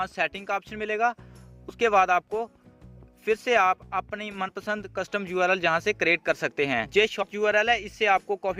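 At 1.69 to 1.74 s, at 4.48 s and at 7.22 to 7.25 s, compressed frames are skipped. Whole blocks of coded audio never reach the output. The sound jumps forward each time. The first two jumps lose about 40 ms, a few frames. The third loses about 100 ms. The jump sizes fit a 10 ms frame.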